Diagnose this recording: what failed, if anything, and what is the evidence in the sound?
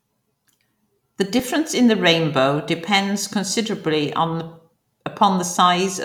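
Nothing failed; no stage shows a fault.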